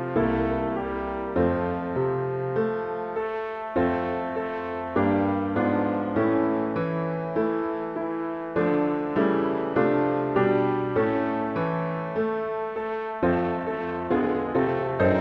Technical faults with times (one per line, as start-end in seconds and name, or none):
12.85-15.21 time-stretched section